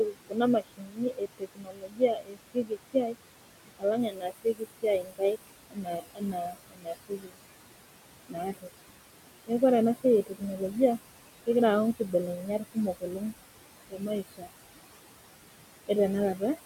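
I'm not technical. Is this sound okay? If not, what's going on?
No. A noise suppressor is working on this speech the whole way through, and it leaves noise suppressor artifacts. It pushes the room noise down hard between words, then lets it back up under them. The voice can sound thin and watery.

There is also speech cut by the noise suppressor. It mistakes quiet parts of the speech for noise and turns them down too, so they sound swallowed or faint. This happens from 0.05 to 3.16 seconds, 3.79 to 7.38, 8.27 to 8.69, 10.04 to 10.77, 11.96 to 13.33, and 13.9 to 14.49. The first two stretches lose the most.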